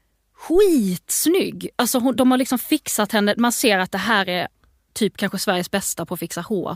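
At 0.55 s, phantom power or a similar supply is switched on or off while the input is live, and the sudden voltage step passes through the coupling capacitors into the signal path. The result is a phantom power thump: a deep, low-frequency thud peaking at about -18 dBFS. It dies away quickly, with a decay of about 51 ms, and is gone by 0.78 s.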